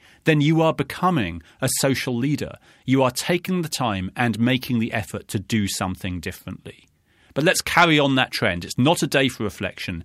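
No technical faults are audible.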